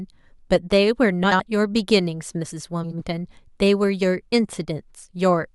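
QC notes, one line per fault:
1.23–1.40 s and 2.83–3.02 s, frames out of order: two adjacent blocks of roughly 80 ms each were swapped and decoded in the wrong order, so each stretch plays its halves reversed. The result is a garbled flutter. No time is lost.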